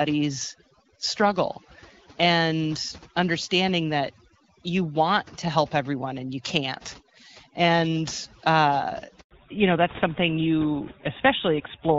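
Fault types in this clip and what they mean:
overdone noise removal: Noise suppression set far too aggressively, switching off individual frequency bands that sit near its noise estimate, taking quiet speech detail with them. Throughout, the background drops and breaks up into twinkling specks.
handover gap: The call was passed between networks and no speech frames arrived during the switch. At 9.21 s the voice dies away and stays silent for about 100 ms until the new link picks up at 9.31 s.
fallback to narrowband: After the handover the call leaves HD Voice, where the AMR-WB codec at 12.65 kbit/s gave clear wideband speech, and moves to a narrowband codec consistent with GSM full rate. From 9.31 s to the end, nothing above 4 kHz remains, leaving the voice duller and rougher.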